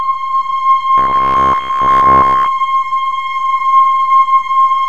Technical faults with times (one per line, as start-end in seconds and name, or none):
0.98-2.48 robotic sound from repeated short buffers